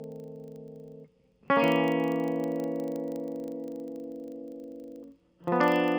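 Music, with a buzz at 25 Hz running through the whole clip. The cause is a filter restarted on every block. It drops its state and starts each block from silence. Each block therefore opens with a small transient. These ticks repeat every 40 ms and merge into a buzz that tracks the music's level.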